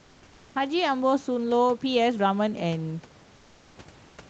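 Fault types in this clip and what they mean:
Comfort noise in place of the background: from 3.35 to 3.75 s, the room background, about 32 dB below the loudest speech, gives way for 400 ms to a smooth, featureless hiss about 3 dB quieter, with none of the real room's texture. The likely cause is discontinuous transmission, consistent with Opus DTX. The sender stopped transmitting when it detected no speech, and the receiver generated shaped noise to fill the gap. The high end across the clip stops near 8 kHz.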